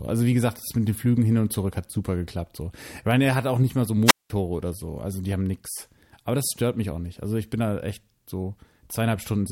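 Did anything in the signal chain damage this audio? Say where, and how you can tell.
Yes. The damage is a wireless microphone squelch dropout, at the radio link ahead of the converter. It comes just after "auch nicht mal so", from 4.05 to 4.30 s. Hiss rises briefly. Then the output falls to near silence for about 0.19 s, and the speech returns. The analogue FM signal faded too far. The receiver's squelch judged the carrier lost and muted the output until the signal recovered.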